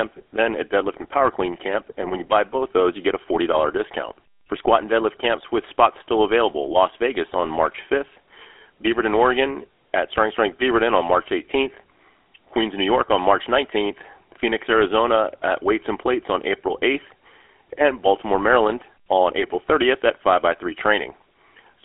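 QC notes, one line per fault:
Throughout: GSM full-rate codec. The speech has that buzzy, gravelly phone-call roughness, with nothing above about 3.8 kHz and a narrow 300 Hz to 3.4 kHz line band. The voice is rebuilt from a vocal-tract model driven by sparse, regularly spaced pulses, which fits the old 13 kbps GSM codec.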